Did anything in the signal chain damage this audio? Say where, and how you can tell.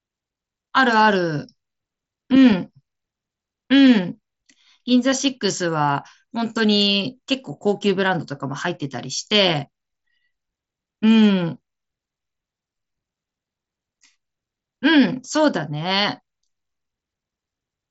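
No, nothing in the chain damaged this one; the speech just comes over a Bluetooth headset link using the wideband mSBC codec, which is why the top end stops at about 7.7 kHz, and that's simply what that path does.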